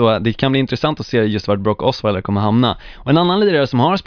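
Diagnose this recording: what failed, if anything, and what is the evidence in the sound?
Nothing in the chain fails here: listening closely, no stage of the recording, processing or playback leaves a mark on this bit of speech.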